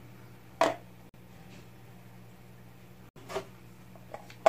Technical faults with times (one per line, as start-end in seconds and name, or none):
1.09-1.15 corrupt frame muted
3.09-3.17 corrupt frame muted